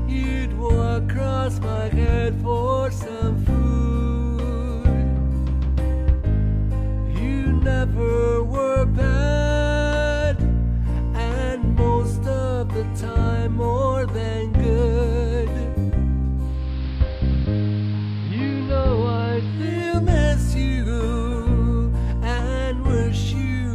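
At 16.35 s, digital radio blending to analogue begins. The receiver loses digital and cross-fades over half a second to the AM broadcast. Hiss rises, roughly 25 dB down. Level dips about 1 dB. Digital returns at 19.97 s.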